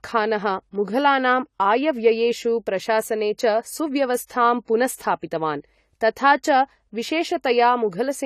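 Throughout the speech, nothing is heard above 14 kHz, and the sound is dull and smeared. This is likely AAC compression, fitting a low bitrate near 32 kbps. From 4.26 to 4.30 s, just before "पुनस्स्थापितवान् तथा", a short hiss lasting 33 ms precedes the attack. This is pre-echo: block-spread quantisation noise leaking ahead of the onset.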